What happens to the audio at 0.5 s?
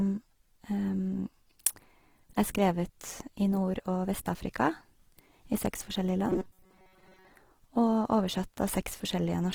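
At 0.5 s the speech carries the grainy, rough texture of Opus compression, present across the whole clip. This is likely the codec's music mode short of bits, filling bands with folded or noise content, which fits a rate near 16 kbps, while the full bandwidth stays up to 20.3 kHz.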